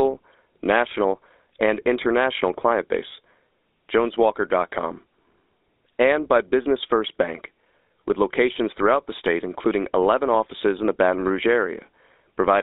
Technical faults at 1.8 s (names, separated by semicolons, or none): GSM full-rate codec